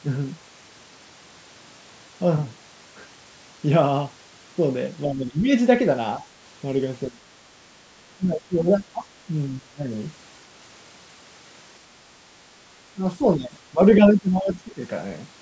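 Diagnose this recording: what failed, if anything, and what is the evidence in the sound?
Speech suppressed in double talk, at the call-processing stage: the speech dips at 5.05–5.49, 6.18–6.24, 7.1–7.26, 8.17–9.91 and 12.95–14.82 s, by about 5 to 20 dB at worst. The likely cause is an echo canceller ducking the near talker while the far end was also active. On a waveform this shows as sudden envelope troughs, and a spectrogram shows the harmonics fading or breaking up.

Other side's voice leaking through, also in call processing: a brief foreign fragment appears at 13.96–14.01 s, roughly 10 dB below the speech and inside a ducked stretch. It is likely residual loudspeaker echo that the canceller missed. A spectrogram would show a faint, separate harmonic pattern there.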